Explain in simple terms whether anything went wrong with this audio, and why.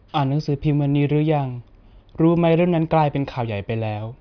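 Nothing went wrong with this speech recording, because no fault can be heard anywhere in it.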